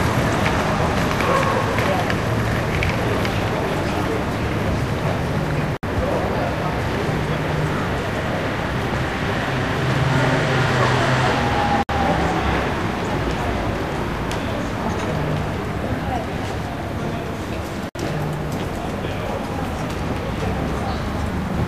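At 5.77, 11.83 and 17.89 s the sound drops out for about 60 ms each, every 6 seconds: a gap at a join of encoded pieces. Each chunk kept its encoder's start delay and last-frame padding, so you hear a short, smeared hole before the sound picks up where it stopped.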